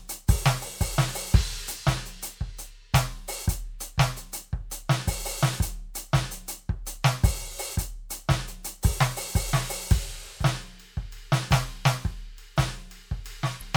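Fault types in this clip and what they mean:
Damaged data in a compressed stream: a short stretch of the encoded music was corrupted, so the decoder could not read those frames properly, lost sync and had to find the next valid frame header before resuming normal output. In this clip it appears once, very close to the end, from about 13.57 to 13.63 s. It is a brief burst of about 50 ms, heard as a sharp chirp or blip that breaks into the music.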